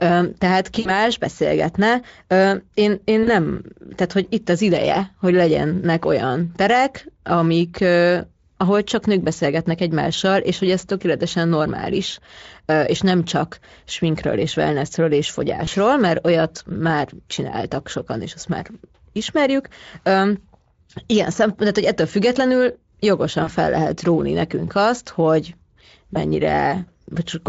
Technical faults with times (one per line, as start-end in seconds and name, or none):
0.79-0.91 VoIP packet loss concealed by the speech codec
3.23-3.29 VoIP packet loss concealed by the speech codec
15.65-15.69 VoIP packet loss concealed by the speech codec
23.43-23.49 VoIP packet loss concealed by the speech codec
26.13-26.18 VoIP packet loss concealed by the speech codec